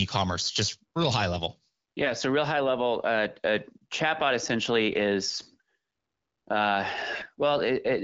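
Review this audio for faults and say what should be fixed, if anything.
You've got AMR bit errors at 2.04–2.13 s, 5.27–5.56 s and 7.13–7.42 s. Flipped low-priority bits, around one in twenty, turn the speech hoarse and gargly while pitch and level hold. Stronger channel coding or better link margin would prevent it.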